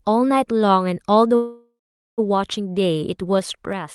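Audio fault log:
1.35–2.20 s, call audio freeze: the speech halts and the last sound is stretched into a fading buzz that sinks into about 440 ms of silence before the talk resumes exactly where it stopped. Nothing is skipped; roughly 0.82 s of stall has simply been inserted, pushing everything after it later. That sets it apart from a dropout, where a chunk of speech would vanish. The likely cause is held-up packets draining the jitter buffer.
3.22–3.94 s, zipper noise: through the final stretch of the clip the level falls by around 10 dB, but in audible 3 dB jumps, roughly three a second, each leaving a small tick so the fade carries a ratcheting texture. The staircase of steps applied without smoothing is what produces the clicks. A clean fader move would glide without any ticking.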